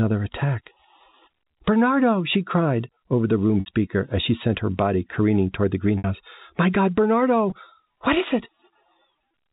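Packet loss with pitch repetition: 60 ms gaps after "cried over the room" (3.60–3.66 s) and after "body careening toward the" (5.98–6.04 s), and a 20 ms gap before "what is it" (7.50–7.52 s) were filled by repeating the last pitch period. The 20 ms one sounds like a brief buzzy hold, while the 60 ms ones fade into silence before speech returns with a short cross-fade, through G.711 telephone-band audio.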